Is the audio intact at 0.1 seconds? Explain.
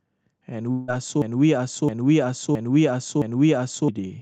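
Yes, at 0.1 seconds the speech comes through intact, with no audible fault at that moment.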